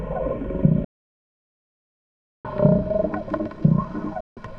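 At 0.84 s the sound drops to silence for 1.6 s, returning at 2.45 s, then cuts again from 4.20 to 4.37 s: digital broadcast dropout, the receiver muting on failed frames with a roughly 3 ms fade. Unlike a wireless dropout, there is no hiss, just clean, frame-sized silence.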